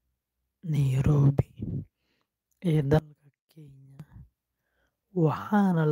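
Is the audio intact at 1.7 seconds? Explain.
No. At 1.69 to 1.71 s, a lost packet was rebuilt from error correction: the following packet carried a low-bitrate copy of the missing 20 ms, which fits a single lost packet, and the decoder played that instead. There is no gap, but this brief stretch of speech sounds rougher and noisier.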